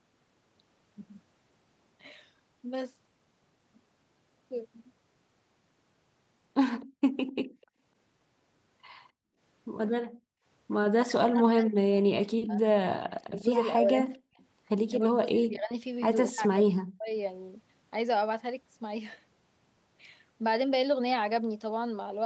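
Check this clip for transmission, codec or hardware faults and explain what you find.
Three echo-canceller faults are audible in this speech clip: a brief echo leak, repeated gating of the background, and speech suppression during double talk. The audio tops out at 8 kHz, which is consistent with a wideband call codec path.

Echo leak, 6.8 to 7.66 s: a delayed copy of the talker trails the original by about 253 ms, sitting roughly 20 dB below it. This is likely residual loudspeaker pickup that the far side's echo canceller failed to fully subtract and then returned down the line.

Background gated by the echo canceller, at 6.86 to 7.77 s, 9.12 to 9.39 s and 10.02 to 10.45 s: the room tone drops by about 35, 32 and 37 dB respectively, then snaps back. The canceller clamped the microphone gain while its loudspeaker was active, leaving each gap at around 300 to 400 ms of near-silence.

Speech suppressed in double talk, at 11.02 to 14.41 s, 14.96 to 15.73 s and 16.3 to 17.13 s: the near talker dips sharply, by up to around 40 dB in the first and third spans and less in the second. 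Overlapping talk likely stopped the canceller from separating the local voice from echo, so it attenuated both.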